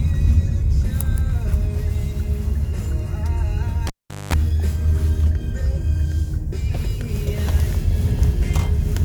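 At 3.87 s the cable is pulled and plugged back in: a pop, then about 413 ms of near silence, including roughly 213 ms of 50 Hz mains buzz as only the plug tip makes contact, and a second pop as the sound returns by 4.34 s.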